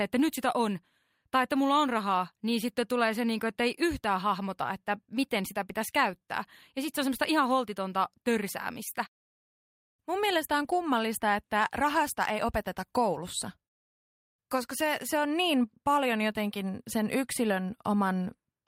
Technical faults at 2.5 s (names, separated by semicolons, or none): none